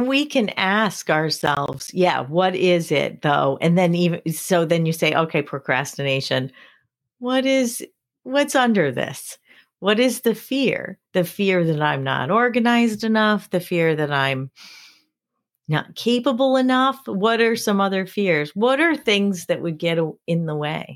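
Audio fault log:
1.40–1.88 s, processor overload crackle: for about half a second the speech is torn by a rapid, gritty crackle that stops when the load passes. The processor is falling behind and missing buffer deadlines one after another, and each missed buffer drops out as a short stretch of silence with hard edges on both sides. Each gap lasts roughly 10 ms, which fits a buffer of around that length, and the sound suggests about ten misses in the burst.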